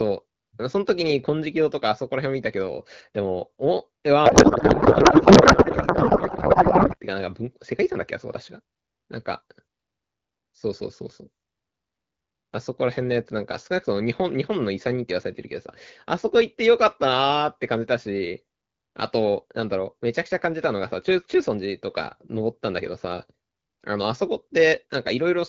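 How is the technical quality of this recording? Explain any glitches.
The recording has one clear glitch in the speech. From 4.25 to 6.97 s the speech turns into garbled noise and warble that barely tracks what is being said. This is a codec payload misread. The AMR-WB stream, carried at 12.65 kbit/s, seems to be packed one way and unpacked another, which fits octet-aligned frames being read as bandwidth-efficient. The decoder therefore pulls parameters from the wrong bit positions until the two sides agree again.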